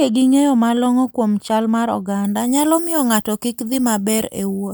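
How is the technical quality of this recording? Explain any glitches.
From 2.25 s to the end, the recording turns thin, bright and hissy, with the s sounds spitting out far harder than before. This is pre-emphasis left on. The treble lift matches the FM 75 µs curve, which raises high frequencies before transmission and relies on a matching de-emphasis cut at the receiver. Here that cut never happens, so the top end stays about 13 dB louder at 10 kHz than at 1 kHz, and the speech loses body and sounds sibilant.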